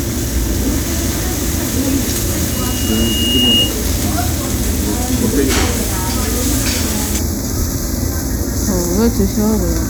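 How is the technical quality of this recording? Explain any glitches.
There is one fault near the end. From 7.19 s until the clip ends at about 9.89 s, the sound turns hollow and phasey. This is channel delay (comb filtering). One channel arrives a fraction of a millisecond late. When the two channels are summed to mono, the shared content cancels at evenly spaced frequencies, starting around 3 kHz. This carves fixed notches through the upper spectrum.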